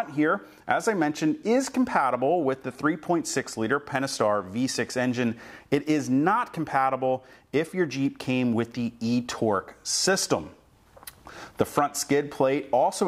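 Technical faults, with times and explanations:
No technical faults are audible.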